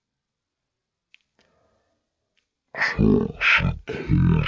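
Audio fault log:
throughout: wrong sample rate. The speech comes out dragged and deep. It is slowed to 0.363 of its proper speed and dropped by 17.6 semitones, so every syllable is stretched and the voice sits far below any natural register. Pitch and tempo have fallen together by a single ratio, which is what happens when samples are played back without rate conversion. That ratio fits audio captured at 44.1 kHz being clocked out at 16 kHz.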